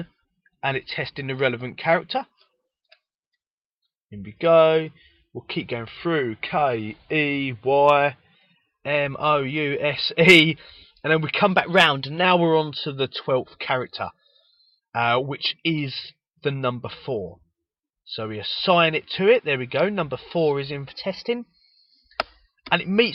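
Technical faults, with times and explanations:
0.74–3.77 s, call bitrate drop: The encoder's rate was throttled hard, which fits a fall from around 128 kbps to about 28 kbps, sitting at its lowest for nearly 3 s. With so few bits the coding turns coarse and the audio bandwidth shrinks from 20 kHz to 8 kHz, so the sound goes dull, muffled and rough until the rate climbs back.
5.97–8.35 s, 11.50–12.25 s and 20.89–22.15 s, drift correction step: Playback speed jumps abruptly, most likely from clock-matching software adjusting its buffer in a single step. In the first stretch the audio runs 6.37% slow and pitch drops 114 cents. In the later two it runs 6.37% fast and rises 107 cents. Each is heard as a sudden detuning of about a semitone, with tempo shifting alongside, then snapping back.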